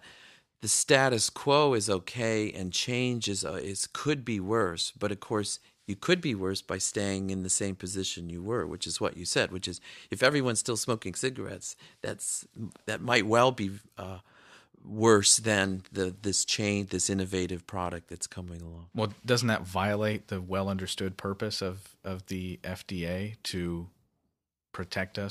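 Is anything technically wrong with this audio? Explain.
No, nothing technically wrong turns up anywhere in this recording, so there's nothing to flag here.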